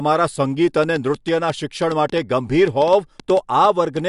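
From 0.84 s to 3.98 s, a train of clicks ticks over the speech and through its pauses: around twenty similar pops at an uneven pace, about 5.4 per second, peaking about 5 dB above the speech. The likely cause is interference from nearby equipment or a faulty connection or power supply.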